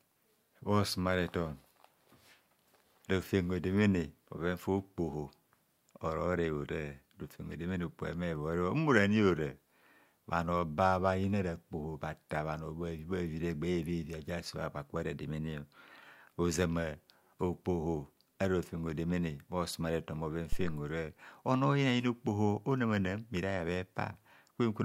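At 20.52 s a deep, low thump interrupts the speech and dies away within about 74 ms, with the disturbance over by 20.86 s and peaking at about -21 dBFS. This is a phantom power thump: a supply switched on or off on the live input sent a step through the coupling capacitors.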